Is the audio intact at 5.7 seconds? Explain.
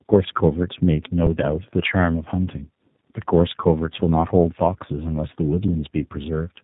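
No. At 5.68 s an underrun with held sample freezes the waveform for about 2.7 ms. The converter holds its last value rather than dropping to zero. With essentially no audio lost, playback resumes where it stopped, so it gives a brief flat stall with only a soft edge, not a clicking gap. Throughout, tandem speech coding through iLBC, G.711 and G.729A leaves the sound rough, warbly and muffled, with nothing above 3.8 kHz, unlike a single codec.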